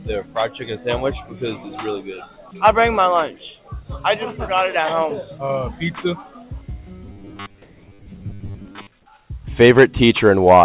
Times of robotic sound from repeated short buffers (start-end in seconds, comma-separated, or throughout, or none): 7.06-8.87